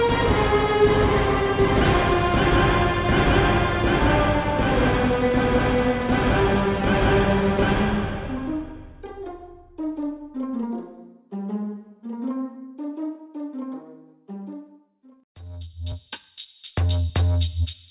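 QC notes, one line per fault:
No faults were heard on any pass through the material.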